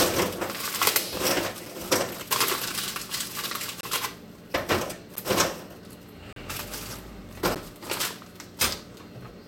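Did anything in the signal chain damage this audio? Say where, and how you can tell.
Yes. The driver or buffer stage left blocks of digital silence. Hard dropouts fall at 1.66 s, 3.81 to 3.83 s, 5.16 s, 6.33 to 6.36 s and 7.55 s. Each cuts out and back without a fade. The 12 and 23 ms gaps fit unfilled 512- and 1024-sample buffers.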